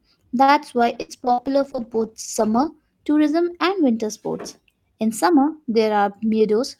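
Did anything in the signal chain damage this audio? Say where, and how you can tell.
Yes. A short stall from a late packet hits at 0.43 to 0.51 s, at the network and jitter-buffer stage. The sound is held for about 44 ms with a faint buzz, then carries on from the same point with nothing lost, so playback runs 44 ms later afterwards.

A call bitrate drop runs from 0.78 s to 2.82 s, ending just before "tourism and winter sports". The encoder was pushed from 48 to 13 kbps, sitting at the bottom for about 1.95 s. The speech sounds coarse, watery and dulled as fewer bits and a narrower band are used.

Two bursts of packet loss fall at 1.02 to 1.12 s and 1.33 to 1.41 s, inside the low-bitrate stretch. In each, the receiver extends the last sound as a decaying buzz or hiss for about 68 ms and 53 ms. About 60 ms of speech is skipped each time.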